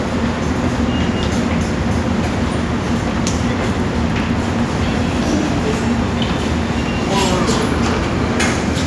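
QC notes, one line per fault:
2.7–6.1 s, resampler restarted on every block: the conversion from 48 kHz to 24 kHz was run on each 100 ms block in isolation, so the filter had no real neighbouring samples at the block boundaries and left a small error at every edge. Those errors recur at 10 Hz, giving a steady train of faint ticks ten times a second that sits on top of the sound and fades wherever the signal drops away.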